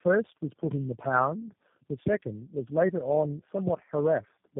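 From start to finish the call has been through tandem speech coding: it crossed several links with their own codecs and was decoded and coded again at each border. The sound points to three low-rate passes of G.729A at 8 kbit/s with A-law G.711 in between, each coder working on the damage of the last. The speech comes out rough, muffled and warbly, with nothing above 3.7 kHz.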